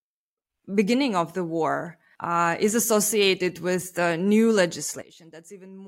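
At 5.02 s the speech drops abruptly by about 17 dB and stays there to the end, a sudden gain jump, likely from a digital gain setting applied without a ramp. Unlike a fade, there is no slope, and unlike a dropout, the sound and its background noise both continue, just quieter together.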